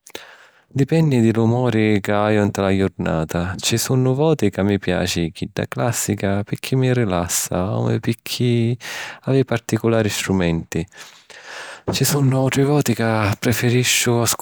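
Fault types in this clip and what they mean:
No technical faults can be heard in this speech recording.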